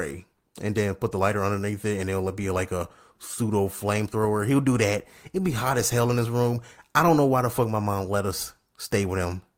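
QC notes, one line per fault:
No faults heard anywhere in this speech recording.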